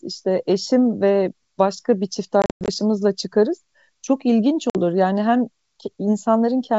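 A speech recording carried over G.722 wideband coding suffers packet loss on an ADPCM call: at 2.42–2.69 s, about twenty packets (190 ms) drop across 260 ms, the longest gap 100 ms, and at 4.70–4.78 s, a few packets (50 ms) go. The silent holes cut off abruptly, and the desynchronised decoder brings the speech back briefly slightly distorted.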